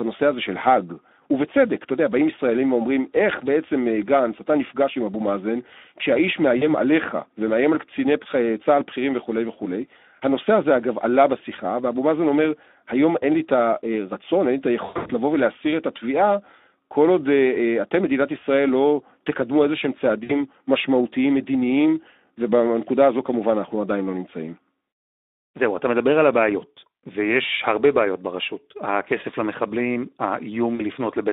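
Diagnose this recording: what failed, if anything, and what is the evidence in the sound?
The codec stage is the main damage, and it runs the whole clip. The speech has the grainy, hoarse texture of a Speex encode at a low-to-middle setting. The sound suggests something around 11 kbps, where the excitation is starved of bits. The band sits roughly between 250 Hz and 3.7 kHz, so it's narrowband phone-line audio with nothing on top. The CELP coding damage is plainly audible, as a noisy, hoarse edge on the voice.

On the network side, there's VoIP packet loss concealed by the speech codec in four places: 6.57–6.66 s, 14.85–15.12 s, 20.23–20.33 s and 30.75–30.84 s. At each gap the decoder carries on from its last pitch and filter while ramping the gain down, so you hear a smeared tail that fades. The 14.85 s one is the worst, with about 200 ms missing in bursts across roughly 240 ms and a longest hole of 100 ms. 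The voice stays weak a little past each gap while the decoder recovers.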